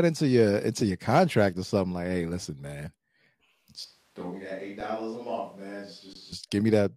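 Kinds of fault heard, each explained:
underrun with held sample: The output buffer ran dry, so the converter held its last value until new data came. The waveform goes flat, so the sound stops with little or no click. This happens three times, at 0.99 s, 4.80 s and 6.13 s, lasting 5.8, 3.7 and 19.1 ms. The first fits a 256-sample buffer. Live audio was lost each time, roughly 5, 4 and 20 ms.
switch to a distant microphone: From 3.85 s to 6.32 s the speech turns roomy and hollow at once, with thinner bass. The level drops by about 10 dB. Room noise rises to roughly 30 dB below the speech. The change in and the change back are both sudden. This likely means the close microphone failed or was dropped, and a microphone further away carried the recording.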